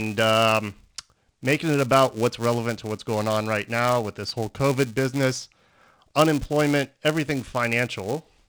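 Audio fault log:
throughout, filter restarted on every block: a steady buzz near 345 Hz rides under the speech, louder on strong syllables and fading in pauses. The filter drops its memory at each block boundary, so each block starts with a small click, consistent with 128-sample blocks.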